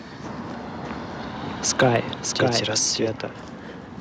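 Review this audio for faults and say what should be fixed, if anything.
Doubled audio track, 0.85 to 3.11 s: a second full-band copy of the speech runs about 0.7 s behind the original, roughly 5 dB quieter. It carries no decay or room colour, so it sounds like a flat, out-of-step duplicate rather than an echo, and it cuts in at 0.85 s and drops out at 3.11 s abruptly. This likely comes from the signal being captured twice, once through a slower path. To prevent it, make sure only one capture or monitoring path feeds the recording.

Microphone overload, 1.79 to 1.88 s and 2.42 to 2.44 s: the input gain was set too high, so the loudest peaks ran past the converter's limit and had their tops sliced off. The first event goes about 6 dB over and gives a harsh, crackling edge. The second is brief and only about 1 dB over, so it adds a milder grit. In both, a small share of the samples are flattened. 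This is likely a gain-staging problem at the microphone input. To prevent it, lower the input gain so peaks stay several decibels below full scale.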